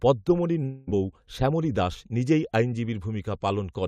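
From 0.63 s to 0.89 s the speech stops being real and turns into a smeared continuation of the last sound, a buzzy tail that fades over roughly a quarter of a second, then the talker returns mid-flow at "শ্যামলী দাস নিজেই" with the intervening stretch simply gone. That pattern points to a likely long network dropout, with the receiver concealing the hole by extending old audio. Unlike a brief packet glitch, the fill lasts hundreds of milliseconds, and unlike a hard cut it never falls to true silence.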